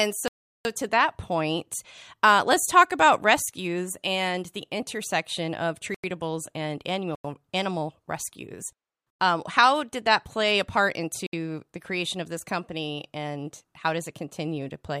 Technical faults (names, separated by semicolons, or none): block of digital silence